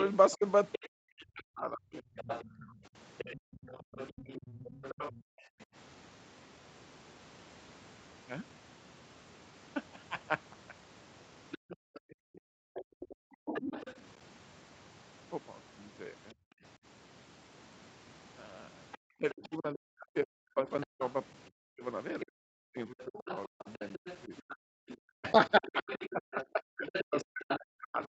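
Speech recording with three faults. A second voice runs under the talker from 0 to 5.19 s and again from 11.51 s to the end. It sits roughly 15 dB below the speech at first, then nearer 10 dB below. This is other side's voice leaking through, likely from loudspeaker echo the canceller failed to remove.

The talker's own speech also drops out. It dips by as much as 40 dB from 0.36 to 5.39 s, at 13.08 to 13.27 s, and from 19.18 s to the end. This is speech suppressed in double talk, likely because the canceller turned down both voices while they overlapped.

The room sound cuts out briefly too. Drops of about 40 dB fall at 3.41 to 5.68 s, 11.58 to 12.74 s and 24.61 to 24.77 s, and one of about 34 dB at 16.34 to 16.63 s. This is background gated by the echo canceller, which clamped the microphone while the loudspeaker played.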